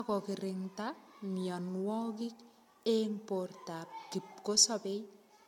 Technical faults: generation loss

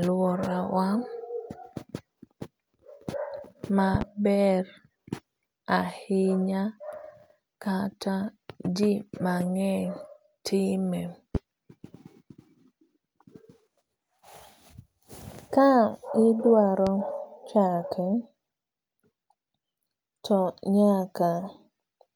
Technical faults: loud pop

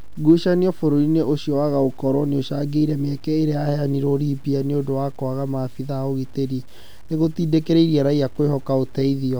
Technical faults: low bit depth without dither

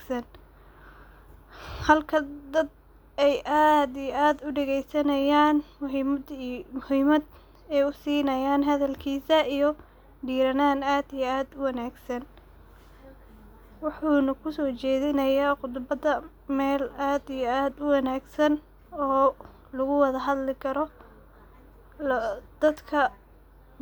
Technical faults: none

